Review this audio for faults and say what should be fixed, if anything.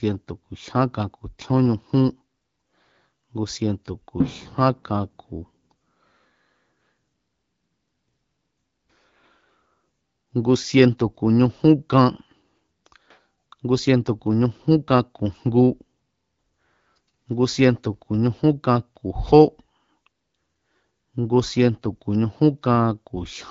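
Nothing here needs fixing; it's speech carried over the AMR wideband (HD Voice) codec at 12.65 kbit/s, with the band stopping around 7.5 kHz as that codec does, and no faults turn up anywhere along the way.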